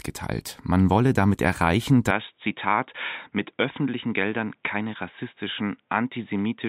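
From 2.11 s, right after "wolle damit erreichen", the speech turns dull and boxy, with nothing above 3.8 kHz, and stays that way to the end. It drops roughly 5 dB in level and picks up a faint new background noise well beneath it. The change is abrupt, with no gap at the switch. This is likely an input switched to a poorer device, such as another microphone or a headset's narrowband call mode, with its own tone, level and noise.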